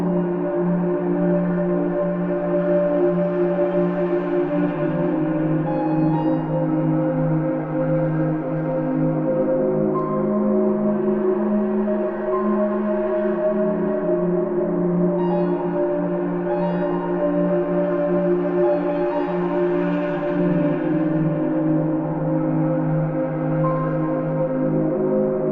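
Nothing in this one trips the ear: no dropouts, glitches or distortion turn up anywhere along the way.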